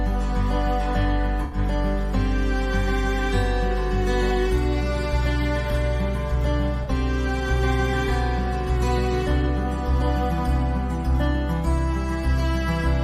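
Two brief smeared, noisy patches interrupt the audio, from 1.43 to 1.58 s and from 6.83 to 6.89 s. This is AAC frame loss with concealment: the decoder rebuilt the missing frames from the last good spectrum, and the 85 ms and 43 ms gaps fit about four and two lost frames.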